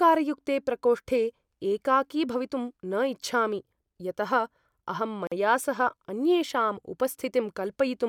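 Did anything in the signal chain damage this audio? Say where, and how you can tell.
Yes. At 5.27 s the speech drops into a silence of about 46 ms, a gap at a join of encoded pieces at the codec stage. Encoder delay and last-frame padding were left in, so the sound resumes exactly where it stopped, unlike a network dropout, which loses audio.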